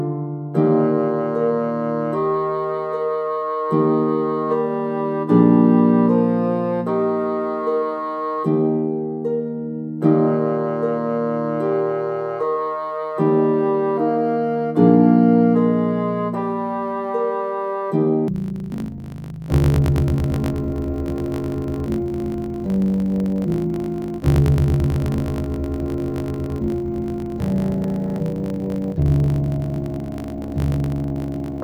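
From 18.28 s to the end, interleaved audio is read as planar in 20 ms blocks, dropping the sound an octave and adding a dull 50 Hz buzz.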